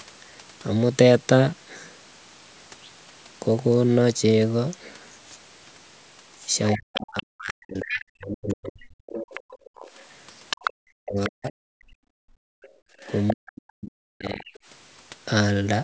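A speech recording from a call, with its audio band ending at 8 kHz, has three linked faults in its later part. A second, quieter voice runs under the talker from 6.71 to 8.05 s, 9.34 to 11.29 s and 12.63 to 14.59 s. It sits about 10 dB below the speech, falling to about 15 dB below in the last stretch. This is the other side's voice leaking through, likely because the loudspeaker sound reached the microphone and the echo canceller left part of it in. The talker's own voice also drops away, by up to about 40 dB, from 6.75 to 9.4 s, 10.72 to 11.72 s and 13.33 to 14.46 s. Each drop lands where the second voice is playing. That pattern is likely speech suppressed in double talk: with both sides active, the canceller cannot separate the talker from the echo and turns both down. The room sound cuts out sharply as well, by about 31 dB for a brief 70 ms dip at 9.7 s, and by about 32 dB from 12.0 to 13.02 s. 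This is background gated by the echo canceller, which clamps the microphone hard while the loudspeaker plays and lets the room sound return once it releases.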